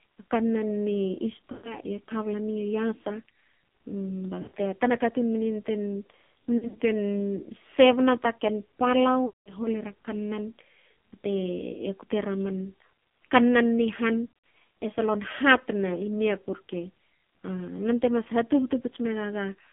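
The whole clip passes through the AMR narrowband mobile codec. The band runs from 150 Hz to 3.5 kHz. The speech sounds heavily buzzy and synthetic, which fits a low mode around 5.9 kbps. The vocal tract model is starved of bits.

Lost AMR speech frames follow at 1.52, 4.42, 6.58, 9.26 and 14.26 s. The decoder repeats its last good settings at falling gain. The gaps of about 120 ms and 200 ms smear and fade out. The scattered losses at 6.58 and 14.26 s warble and dip instead.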